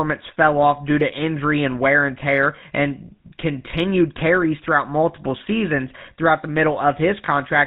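The whole clip has been through the GSM full-rate codec, and the damage is easy to hear. The speech has that buzzy, gravelly edge, which fits the old 13 kbps full-rate coder. It describes the vocal tract with a filter and excites it with a sparse, regularly spaced pulse train, so fine detail in the excitation is thrown away. Nothing gets through above 4 kHz, which leaves the sound dull and boxy on top of the roughness.

Right near the end, from 7.26 to 7.29 s, there are lost GSM frames. The decoder had no good data for a moment, so it reused the parameters from the last good frame. What you hear is a brief metallic, ringing smear instead of fresh sound. The gap fits a single lost 20 ms frame, and it's too short for the concealment to fade toward silence.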